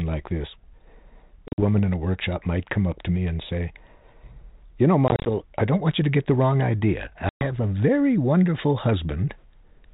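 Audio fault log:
1.48–1.79 s, packet loss on an ADPCM call: about 90 ms of hard-edged gaps scattered over 100 ms, longest 50 ms. The G.726 decoder's predictor drifts, so audio resumes slightly distorted before "in a workshop might".
5.08–5.29 s, packet loss on an ADPCM call: about 100 ms dropped in short gaps over 180 ms, longest 30 ms. A desynchronised step size leaves distortion settling into "I don't want you".
7.29–7.47 s, packet loss on an ADPCM call: about 120 ms of silence after "get the wrong idea", which fits roughly ten lost packets. Speech returns slightly distorted at "a very wonderful".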